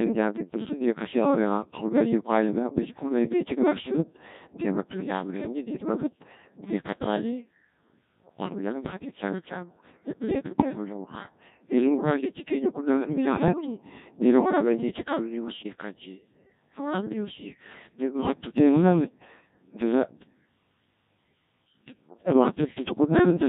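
Speech that comes through a Codec 2 vocoder for its whole length sounds robotic and buzzy, and the heavy damage fits a rate of about 1.6 kbit/s. Only pitch, voicing, energy and envelope survive, so a spectrogram shows neat synthetic harmonic stacks with smeared formants. The waveform no longer matches the original. Bit errors on digital voice radio hit at 10.45–10.75 s and 15.48–15.73 s, where the first burst sounds like a bit error rate of a few percent and the second like a somewhat lower one. Each corrupted frame is rebuilt with wrong parameters, so the voice leaps in pitch and level and turns into warbling bleeps. On a spectrogram these spans show abrupt, blocky jumps in the harmonic spacing and in the band energy.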